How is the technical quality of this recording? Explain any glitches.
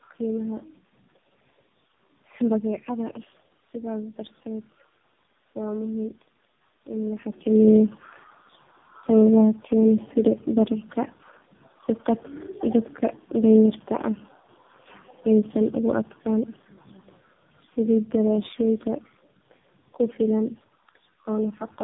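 The recording is degraded throughout by tandem speech coding, and in its last stretch an automatic gain control pulls the level down.

Tandem speech coding, throughout: the speech appears to have passed through about three low-rate speech codecs in a row, consistent with G.729A followed by two AMR-NB stages. Each stage re-encoded the previous one's damage. The result is rough, muffled and warbly, with nothing above about 3.8 kHz.

Automatic gain falling, 13.34 to 21.56 s: a gain control judged the input too loud, or its background too strong, and lowered its gain gradually by about 6 dB. The speech and the room background sink together, unlike the natural level change around 7 s, where the talker simply moves.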